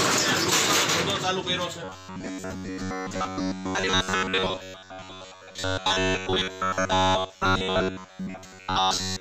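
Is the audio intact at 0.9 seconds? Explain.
Yes, at 0.9 seconds the audio runs on without any dropout, click, glitch or other fault.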